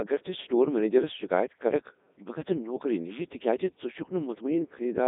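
Speech run through the Codec 2 vocoder for the whole clip, sounding robotic and buzzy; the heavy damage fits its 3.2 kbit/s mode. A spectrogram shows resynthesised harmonics within 200 Hz to 3.7 kHz, nothing above 3.8 kHz, and a waveform unlike the original.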